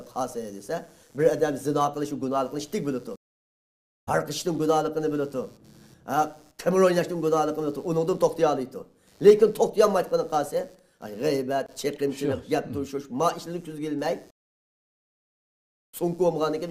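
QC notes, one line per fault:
Throughout, computer activity noise: a buzzing pulse at around 100 per second, roughly 35 dB below the sound, rising and falling with the computer's workload rather than the audio, as processor or graphics load shifts the shared ground the audio circuit rides on.
3.16–4.08 s and 14.30–15.94 s, stream reconnect: the connection drops, leaving 0.88 s and then 1.6 s of silence. Each time, a fresh decoder picks up mid-stream and fades in, landing about half a second ahead the first time and only slightly ahead the second, so material is skipped.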